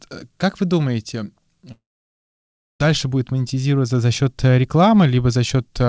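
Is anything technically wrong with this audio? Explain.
Yes. From 1.72 to 2.82 s, after "как вы думаете", the sound smears into a brief fading buzz, then roughly a second of silence before "будет монетизироваться за счет". This is likely a long network dropout: the receiver stretched the last sound, then gave up, and the lost stretch never returns. Unlike a short packet-loss glitch, the gap lasts over a second and skips content rather than briefly warbling.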